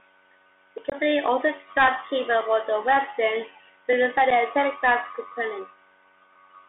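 Throughout, the speech carries the Bluetooth CVSD headset codec: a one-bit delta coder whose adapting step lags fast, loud high content, so sibilants turn scratchy over a granular hiss. On a spectrogram the energy sits between 300 Hz and 3.6 kHz with nothing above, which fits a 64 kbps link.

At 0.90 to 0.95 s, and again at 4.31 s, unconcealed Bluetooth headset packet loss leaves holes of 22.5 ms and 7.5 ms. Each gap was filled with silence or an idle pattern, so the speech breaks off abruptly and resumes briefly quieter.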